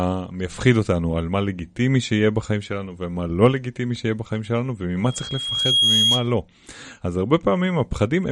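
From 5.04 to 6.35 s, loudspeaker feedback squeal: the microphone picks up its own loudspeaker, and the loop gain exceeds one at 3.3 kHz. A pure tone swells over about 0.7 s to roughly 5 dB above the speech. On a spectrogram it is a single brightening horizontal line, and on the waveform a growing envelope.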